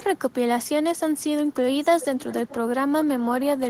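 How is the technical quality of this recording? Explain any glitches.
Two echo leaks mar the speech. From 0.02 to 0.33 s a faint delayed copy trails the speech by about 0.44 s, and from 2.0 to 2.55 s a louder one follows at about 0.42 s, only around 15 dB below. The likely cause is a far-end speakerphone whose echo canceller let its microphone's pickup return down the line.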